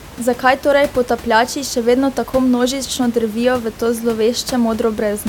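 Nothing here goes wrong on the technical side: the speech comes across steadily, with just the room's own background noise sitting about 19 dB beneath it, which is part of the recording rather than anything the system did.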